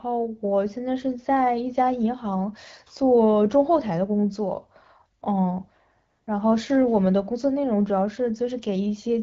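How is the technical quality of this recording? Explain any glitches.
Two faults affect the speech. A faint roughness runs through the whole recording, and two short patches of synthetic noise interrupt it.

Sample clock jitter is present throughout. The converter clock wavers by under a microsecond, so samples land slightly off time. This adds a faint hiss, roughly 55 dB down, that grows on loud, bright sounds.

AMR comfort noise appears at 5.19 s and again from 6.09 to 6.27 s. The phone briefly treated the talker as silent and stopped sending speech frames. The receiver filled the gaps with smooth, generated noise. It switches in and out, replacing the real background.

The comfort noise belongs to the AMR wideband (HD Voice) codec, which carries the call with only light colouring, consistent with its mid-rate mode.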